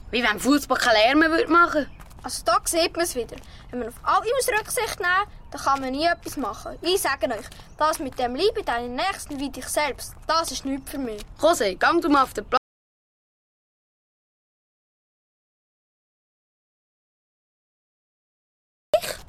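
At 12.57 s the sound cuts off abruptly into silence, with no room tone, until 18.94 s, about 6.4 s lost. This is an audio dropout to silence, likely from the input being lost while zeros kept being written. The waveform shows a flat line, the spectrogram a blank band.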